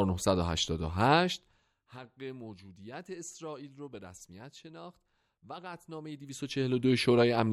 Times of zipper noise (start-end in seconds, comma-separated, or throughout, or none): 5.96-6.92